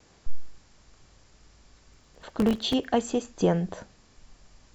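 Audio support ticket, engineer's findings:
Processor overload crackle, 1.94 to 2.84 s. Dense burst of gritty crackle riding on the speech for just under a second, then clean. Probable component: audio processing thread/CPU. Mechanism: a few dozen buffer deadlines missed repeatedly, each miss dropping a hard-edged silent gap. Gap length fits very short buffers of roughly 1.5 ms. Clears once the load passes.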